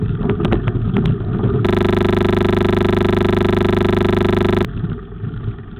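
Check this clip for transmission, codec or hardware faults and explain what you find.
One hardware-side fault is present. From 1.67 to 4.65 s a system hang loop occurs: the machine stalled while the audio device kept replaying its ring buffer, repeating one 40 ms slice. This is heard as a steady 25 Hz buzz. The waveform shows identical repeating blocks, and the spectrogram shows evenly spaced harmonic lines at multiples of 25 Hz.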